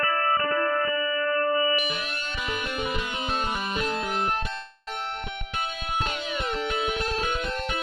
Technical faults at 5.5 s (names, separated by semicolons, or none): none